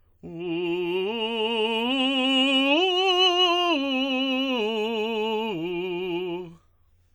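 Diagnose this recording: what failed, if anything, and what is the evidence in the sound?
The codec stage is where this went wrong, and it's present throughout the music. Transients ring and smear, with a washy hiss that swells and breathes along with the signal. That's likely WMA compression, which fits a bitrate around 48 kbps. The long transform blocks spread quantisation noise over tens of milliseconds, even though content still reaches up to about 20.1 kHz.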